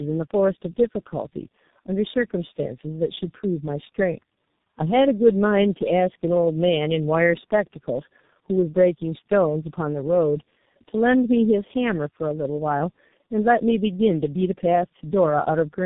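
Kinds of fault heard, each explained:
Tandem speech coding: The speech has passed through three low-rate speech coders in a row, with each one re-encoding the previous one's already damaged output, so the errors stack up. The result is rougher, more muffled and more warbly than a single pass would be, and the last stage sounds like a 6.3 kbit/s G.723.1-type coder. On a spectrogram nothing appears above 3.8 kHz, and the harmonics look smeared and blotchy.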